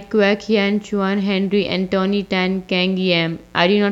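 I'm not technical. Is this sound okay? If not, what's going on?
No. There is mains buzz running through the whole recording, from the first second to the last. It is a steady, raspy hum sitting quietly underneath the speech. It comes from the 60 Hz electricity supply leaking into the audio: something like a light dimmer, a power adapter or a poorly shielded cable adds sharp electrical spikes twice per cycle, and those spikes pile up into a gritty buzz rather than a smooth hum.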